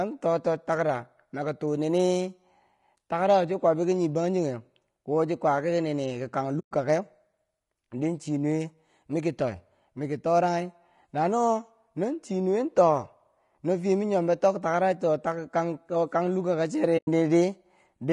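A speech recording that has likely passed through low-delay AAC compression, the AAC-ELD codec used for video calls. Its short frames separate pitch harmonics poorly, and at a rate that sounds like about 32 kbps the voice turns rough and grainy, with noise filling the gaps between harmonics and a thin, synthetic top band. AAC frame loss with muting also appears twice: at 6.59 to 6.72 s, a gap of about 120 ms, and at 16.97 to 17.08 s, about 100 ms. In each, the decoder zeroed the missing frames' spectrum, so the overlapping windows fade the sound down into a soft-edged silence and back up.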